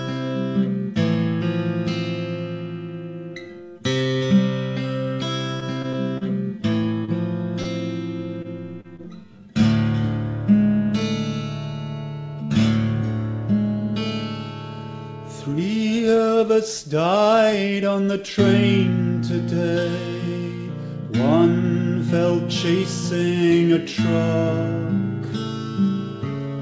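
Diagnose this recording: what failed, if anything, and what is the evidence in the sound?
Network stage, repeated packet loss (robotic sound): from 5.60 to 6.24 s, four gaps up to 32 ms each get patched by extending the last sound, giving a choppy stretch.

Short concealed packet loss, also on the network side: around 30 ms goes missing at 7.05, 7.62 and 8.81 s. Concealment bridges each hole, so you hear a quick smear or wobble.

Short stall from a late packet, in the jitter buffer: at 8.42 and 8.96 s it runs dry. The last sound is held about 24 ms and nothing is lost, but the delay grows each time.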